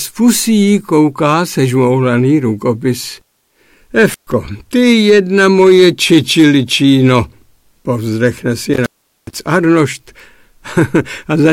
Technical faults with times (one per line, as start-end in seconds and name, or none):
0.00-11.53 hard clipping
4.10-4.32 intermittent contact
8.74-9.40 intermittent contact